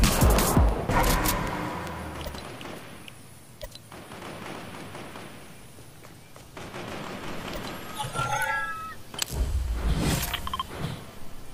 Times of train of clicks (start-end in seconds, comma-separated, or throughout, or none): 0.04-1.88